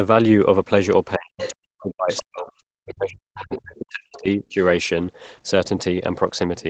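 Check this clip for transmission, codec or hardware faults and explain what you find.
Two kinds of fault are audible, both in the first 4.6 s of the clip.

Speech suppressed in double talk occurs from 1.17 to 2.5 s and again from 2.74 to 4.6 s. The talker's speech dips sharply, by as much as about 40 dB. Roughly a second of the first stretch is affected and about one and a half seconds of the second. The likely cause is an echo canceller facing two voices at once. Unable to tell the talker from the loudspeaker echo, it turned both down.

The other side's voice leaking through is heard four times: 1.38 to 1.54 s, 2.09 to 2.43 s, 3.39 to 3.58 s and 4.13 to 4.2 s. A second voice appears faintly under the talker. It is loudest at the first leak, roughly 10 dB below the speech. Each later leak is quieter, down to about 25 dB below. The likely cause is loudspeaker sound reaching the microphone that the echo canceller did not fully remove. 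The scraps are short. The whole clip is band-limited at 8 kHz by the call path.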